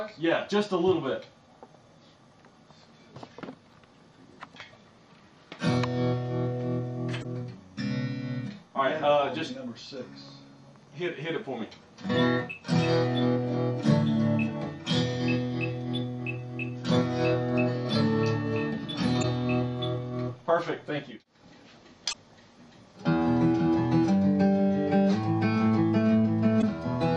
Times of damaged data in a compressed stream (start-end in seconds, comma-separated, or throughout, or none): 7.20-7.25, 19.19-19.24, 22.09-22.14, 26.58-26.64